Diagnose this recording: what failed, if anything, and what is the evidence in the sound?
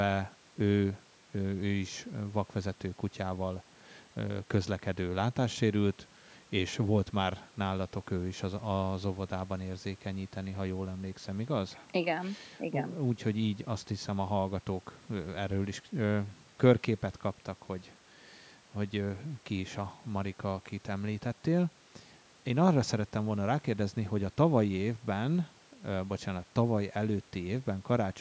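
Nothing in the speech has failed: it carries the ordinary imprint of call microphone processing, with the lowest bass trimmed by its high-pass filter and no content above 8 kHz, and shows no dropouts, distortion, timing or level problems at any point.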